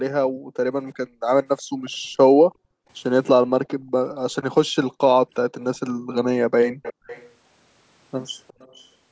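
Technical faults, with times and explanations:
0.27–2.88 s, 3.76–3.96 s, 5.94–6.08 s, 6.93–7.06 s: background gated by the echo canceller. The room tone behind the talker dips sharply, by about 40 dB at its deepest (about 25 dB in the 5.94 s instance), then returns. The first span is gated on and off for about a second and a half in total, and the later ones are brief dips. The canceller is suppressing the microphone hard while far-end audio plays on the loudspeaker, so the ambience drops out with it.
1.57–1.90 s, 5.35–6.15 s, 6.82–7.29 s, 8.48–8.88 s: echo leak. A copy of the speech trails the original by 362 ms, consistently each time. It is very low at 1.57 s and 8.48 s, somewhat stronger at 5.35 s, and most audible at 6.82 s. The fixed delay points to loudspeaker sound re-entering a microphone, likely where the echo canceller failed to fully remove it, so residual echo was sent back into the call.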